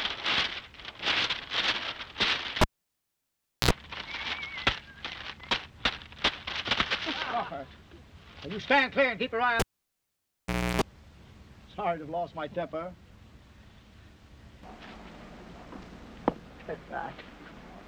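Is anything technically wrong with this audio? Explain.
Yes. A cable pulled and plugged in occurs at 2.61–3.71 s and 9.60–10.82 s: a pop, roughly 1.05 s and 1.17 s of near silence, then 60 Hz mains buzz (63 ms, then 309 ms) while only the plug tip makes contact, and a second pop as sound returns.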